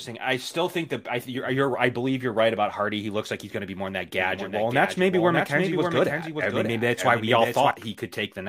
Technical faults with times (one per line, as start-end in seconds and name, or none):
4.19-7.71 doubled audio track